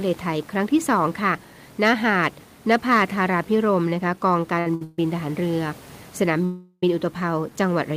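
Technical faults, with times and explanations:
4.59 to 4.67 s and 4.75 to 4.82 s, short stall from a late packet: the sound is held about 60 ms each time, then resumes in place; brief, nothing lost, unlike a freeze.
4.84 to 4.99 s and 6.45 to 6.83 s, call audio freeze: the sound is drawn out into a fading buzz for 139 ms and 376 ms, the second trailing into 30 ms of silence, likely from packets held up in transit; resumes where it stopped.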